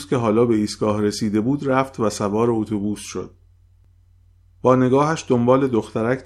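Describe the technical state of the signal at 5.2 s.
At 5.2 s the speech signal is intact, with no audible fault at that point.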